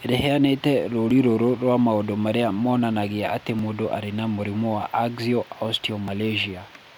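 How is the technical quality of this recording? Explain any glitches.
The recording has three brief skips in the speech, evenly spaced. At 1.1 s, just before "rũrũ rwa maũndũ marĩa", at 3.59 s, between "maũndũ marĩa monanagia atĩ" and "mũndũ arĩ na mũrimũ", and at 6.08 s, the audio jumps ahead by roughly 15 ms with no gap of silence. The 2.5 s spacing points to audio missing between chunks, likely from a recorder dropping samples at each buffer handover. A random dropout would leave a silent hole at irregular times.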